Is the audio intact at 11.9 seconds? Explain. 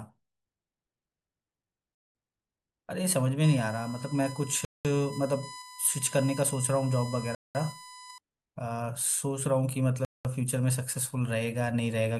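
Yes, the speech at 11.9 seconds is intact, with no audible fault at that moment.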